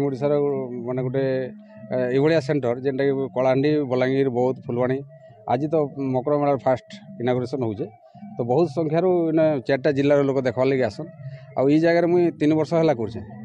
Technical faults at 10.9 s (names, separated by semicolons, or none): none